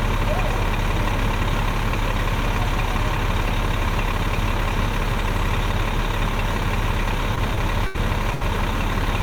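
Lost packet rebuilt from error correction, 7.37 to 7.39 s: one 20 ms packet never arrived, but the next one carried a low-bitrate backup copy. The decoder played that copy, so there is no gap. Because the copy is coarsely coded, those 20 ms come out rougher and grainier than the audio around them.

Short concealed packet loss, 7.55 to 7.59 s: about 20 ms of audio missed the decoder. This time there was no backup copy. The receiver bridged the hole with roughly 18 ms of synthesized continuation, extending the last sound as either a pitched tone or shaped noise, then crossfaded back into real audio. It comes across as a quick smear or wobble.

Burst of packet loss, 7.87 to 7.97 s and 8.35 to 8.43 s: in the first, about 80 ms went missing and was covered by about 75 ms of concealment. The receiver stretched the last sound and let it fade, heard as a held buzz or dying hiss. Playback then jumps ahead with that stretch gone. 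The second burst behaves the same way, with about 60 ms lost and roughly 62 ms of fading fill.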